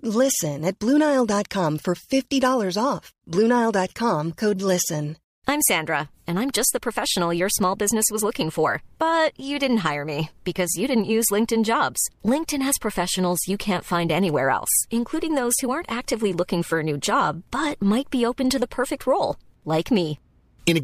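No technical faults can be heard anywhere in this speech recording.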